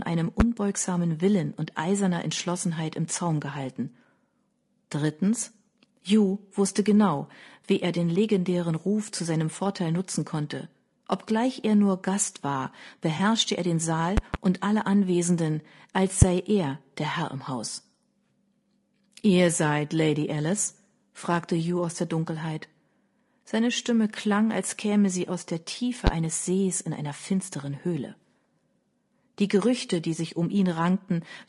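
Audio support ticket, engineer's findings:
Rough, grainy speech throughout. Noise sits between harmonics, and the top band sounds thin and synthetic. Likely low-delay AAC compression (AAC-ELD) at a low rate, consistent with about 32 kbps.

Smeared, noisy patch at 13.17–13.20 s, just before "er den". AAC frame loss with concealment. Around 20 ms of audio is missing, which fits one lost frame. The decoder filled the gap from the preceding spectrum.

Loud pop at 0.40–0.43 s and at 26.07–26.10 s. Two pops at 14.17–14.37 s, before "und alle". One at 16.22–16.25 s, before "er der". Peaks reach about 20 dB over the speech, and about 25 dB at 16.22 s. Likely electrical transients.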